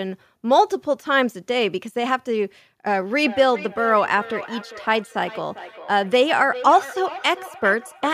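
It's a speech clip, and from 3.23 s to the end there's feedback echo between two devices: the speech comes back at a steady interval of roughly 400 ms, peaking about 15 dB below the direct sound. That's the signature of two devices in the same room on one call, where each microphone picks up what the other device plays, and neither echo canceller can remove sound it didn't play itself.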